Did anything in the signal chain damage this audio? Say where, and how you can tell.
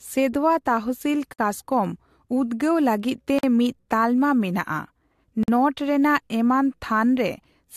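Yes. A gap at a join of encoded pieces, a codec-stage fault, opens at 1.33 s after "ᱥᱮᱸᱫᱷᱣᱟ ᱛᱟᱦᱥᱤᱞ", at 3.39 s after "ᱞᱟᱹᱜᱤᱫ ᱛᱮ", and at 5.43 s. The silences are 56, 48 and 48 ms long and recur every 2 s. Separately encoded speech segments were joined untrimmed, so each encoder's start-up delay and final-frame padding leaves a hole before the speech resumes where it stopped.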